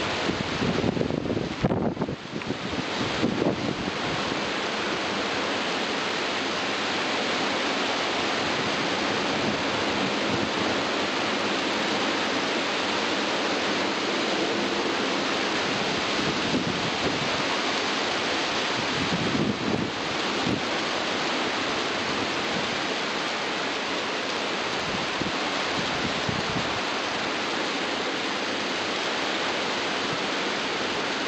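From 10.31 s to 31.13 s a train of clicks runs through the audio, likely caused by interference from nearby equipment or by a faulty connection or power supply injecting a pulse over and over. The result is around 200 similar-shaped pops at about 9.3 per second, spaced unevenly rather than on a steady beat. They stand roughly 10 dB above the surrounding sound and can be heard as ticking in the pauses as well.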